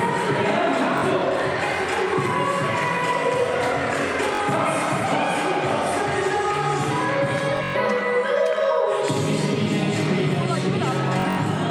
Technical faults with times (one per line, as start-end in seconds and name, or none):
0.98-1.04 Bluetooth stutter
4.35-4.41 Bluetooth stutter
7.57-7.76 Bluetooth stutter
11.20-11.38 Bluetooth stutter